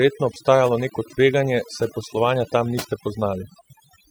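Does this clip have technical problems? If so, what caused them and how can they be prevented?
Yes. Overdone noise removal runs throughout this speech: a noise reducer set too aggressively pulls individual frequency bands down whenever they sit near its noise estimate, leaving near-silent gaps with twinkling specks. Use gentler reduction settings and check results by ear.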